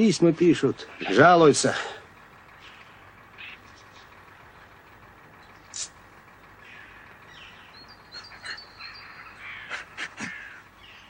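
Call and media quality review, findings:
Nothing stood out on listening; no fault to log against this clip.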